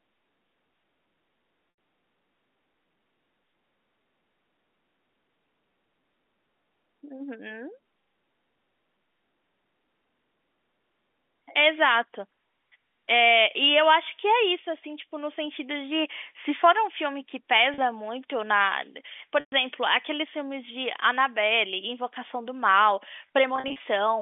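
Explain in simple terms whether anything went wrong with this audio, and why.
Bits of the stream were lost in transit: packet loss with pitch repetition. The receiver covered each gap by repeating the last bit of voice, giving a brief held, buzzy sound at 17.74 s and in scattered short gaps from 23.56 to 23.8 s, while at 1.7 and 19.4 s the repeated sound fades into silence before the speech returns.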